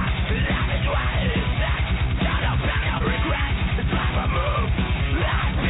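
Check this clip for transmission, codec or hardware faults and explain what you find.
One transmission fault, in audio band-limited to 4 kHz as fits a G.711 A-law call path. From 2.98 to 3.02 s, short concealed packet loss: about 20 ms of audio arrived too late, so the receiver extrapolated the preceding sound to bridge the gap, leaving a brief smear or wobble.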